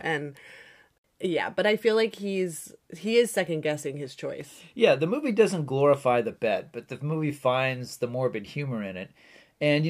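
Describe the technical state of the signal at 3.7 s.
At 3.7 s you're inside a run of clock slip clicks stretching from 0.63 to 9.35 s: faint, evenly spaced ticks roughly every 0.7 s, louder on stronger speech. One sample drops or repeats each time, likely from two unsynchronised clocks drifting a few tens of ppm apart.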